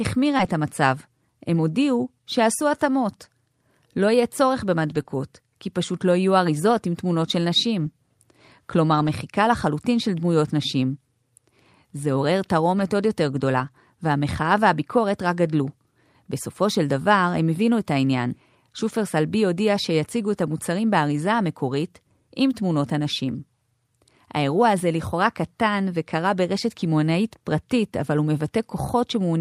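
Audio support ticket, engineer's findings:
Brief smear and wobble in the speech at 0.37–0.41 s and 5.03–5.07 s, each about 20 ms missing. Short concealed packet loss: packets arrived too late for the decoder, which extended the preceding sound to bridge the hole, then crossfaded back into real audio.

Rough, noisier stretches with no gap at 0.39 s, 4.91–5.01 s, 5.07–5.09 s, 7.81–7.87 s, 8.91–9.09 s, 12.79 s, 13.59–13.69 s and 28.01–28.07 s, 20 to 100 ms each. Lost packets rebuilt from error correction: Opus in-band FEC supplied low-bitrate copies in place of the lost frames.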